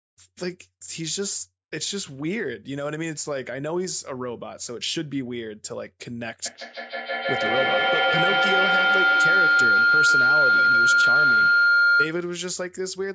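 From 6.46 to 12.24 s, a feedback howl near 1.5 kHz swells to about 9 dB above the speech, repeating roughly every 150 ms as the loop gains level.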